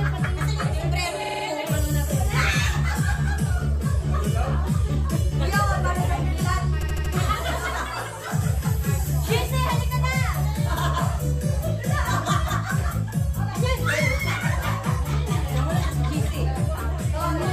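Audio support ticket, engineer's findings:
Repeated frames at 1.23–1.44 s and 6.82–7.13 s: stutter, a 52 ms then 78 ms block replayed four extra times; fits two-, then three-frame blocks duplicated upstream of the decoder. Identical content replays and the clip lengthens 0.21 s and 0.31 s; a dropout would leave a gap instead.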